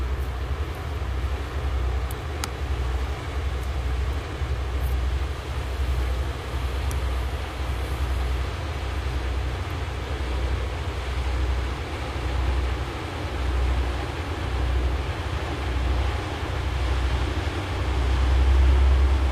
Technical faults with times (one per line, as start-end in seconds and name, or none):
none